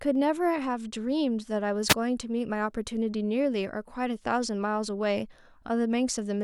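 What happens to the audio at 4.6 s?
Nothing goes wrong at 4.6 s; the speech carries straight through that point with no dropout, click or other fault.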